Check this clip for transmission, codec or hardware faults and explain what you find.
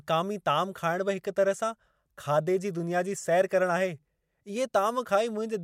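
No transmission, codec or hardware faults.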